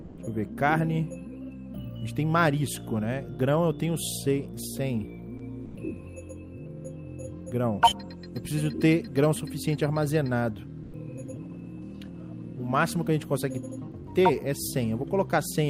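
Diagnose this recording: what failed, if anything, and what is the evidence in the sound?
Four brief dropouts where the sound gives way to flat comfort noise: 0.01–0.17 s, 5.37–5.39 s, 5.65–5.75 s and 10.83–10.93 s. That's sound dropped by the voice detector at the codec stage, likely Opus DTX misreading real sound as background and pausing transmission.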